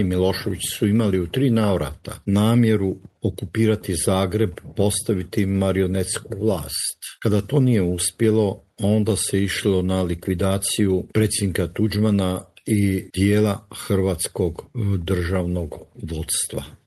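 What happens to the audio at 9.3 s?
Nothing goes wrong at 9.3 s: the audio carries on intact through that moment, with only the steady coding character and the top end limited to about 12 kHz that the Opus call path gives it throughout.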